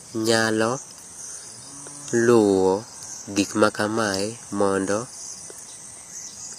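All the way through, the speech has that plainly audible HE-AAC compression sound: s sounds come out gritty and lispy, and nothing reaches above about 14.9 kHz. That's likely the treble being rebuilt from copied lower bands, which fits a low bitrate around 24 kbps.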